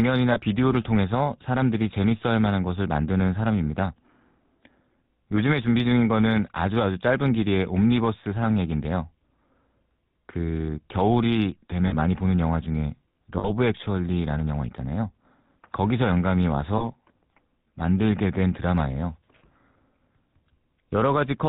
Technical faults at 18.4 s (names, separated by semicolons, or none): GSM full-rate codec